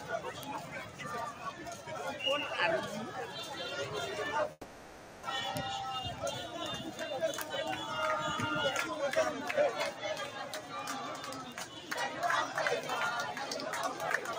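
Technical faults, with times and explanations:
Throughout: noise suppressor applied to music or sounds. A speech-tuned suppressor stayed active, pulling held and fading sound down by about 5 dB, so the level pumps and thins.
0.61–1.00 s, 1.33–1.87 s, 10.32–10.73 s, 11.42–11.91 s: sound cut by the noise suppressor. Steady passages were mistaken for noise and dipped by about 5 to 6 dB.
4.51–5.25 s: long network dropout. The last sound is stretched into a fading buzz or hiss for about 0.72 s, likely because packets stopped arriving. It goes briefly silent, and the audio resumes with that stretch missing.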